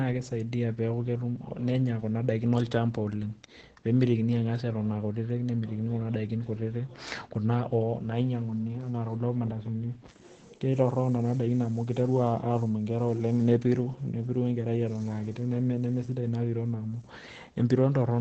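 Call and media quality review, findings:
Opus compression, full clip. Speech muffled and hoarse, heavy codec damage throughout, nothing above 8.8 kHz. Likely Opus dropped into its speech (SILK) mode at a starved rate, which fits something around 12 kbps. The encoder throws away the top band and models the voice coarsely, so detail comes out rough and dull.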